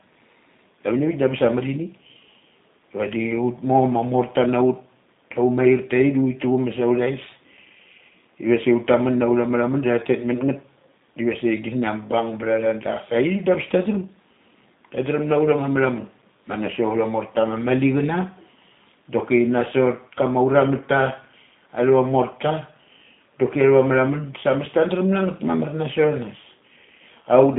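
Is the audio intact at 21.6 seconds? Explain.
No. At 21.6 seconds the speech is still going through the G.729 codec damage that runs the whole clip. There's nothing above about 3.8 kHz and the band sits roughly between 200 Hz and 3.7 kHz, so the speech sounds boxed in, like a phone line. The codec doesn't keep the waveform. It rebuilds the speech from a vocal tract model, pitch prediction and a few pulses, which leaves a rough, slightly synthetic edge that fits an 8 kbit/s G.729A stream.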